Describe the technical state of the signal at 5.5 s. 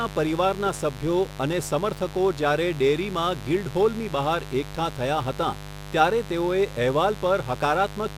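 At 5.5 s the speech sits over a mains buzz, which runs unbroken through the whole clip rather than starting or stopping near this point. Sharp switching spikes, the kind a dimmer, rectifier or poorly shielded line couples in, recur twice per 50 Hz cycle, so the interference carries a dense ladder of 50 Hz harmonics extending into the kilohertz range. The result is a constant raspy buzz, not a smooth hum, sitting roughly 15 dB below the speech.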